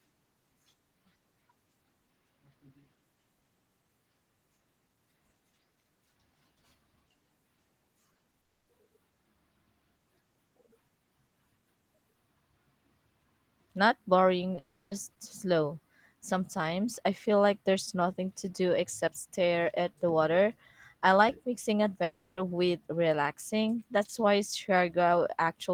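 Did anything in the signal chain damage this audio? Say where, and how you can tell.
Yes, at the network stage. Brief smears and wobbles occur at 8.13, 8.17, 8.31 and 14.55 s. Each marks short concealed packet loss: about 20 ms of audio arrived too late, and the receiver extended the preceding sound before blending back.

Longer gaps with a fading synthetic buzz or hiss and missing audio occur at 8.41–8.69 s (mostly silent, about 0.23 s), 14.59–14.93 s, and 22.03–22.39 s between "water I like mixing" and "with relaxing". A long network dropout is the likely cause: concealment stretched the last sound, then the audio resumed with the gap lost.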